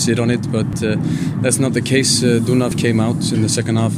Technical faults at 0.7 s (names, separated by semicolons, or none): audio missing between chunks